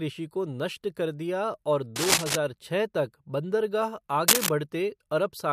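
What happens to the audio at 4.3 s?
Cable scratch noise runs from 4.28 to 4.51 s: a burst of dense, uneven scratching and rustling sits over the speech, about 5 dB louder than it. The likely cause is a worn cable or connector shifting, its contact resistance fluctuating rapidly.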